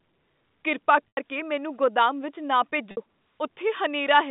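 At 1.08 s a 90 ms gap gets patched by packet loss with pitch repetition: the receiver loops the last pitch period, so you hear a brief held buzz just before "ਮੈਨੂੰ ਗੋਦਾਮ ਵਿੱਚ ਨਾ". The same thing happens at 2.91 s, with a shorter 60 ms hold right after those words, all over the narrow G.711 phone band.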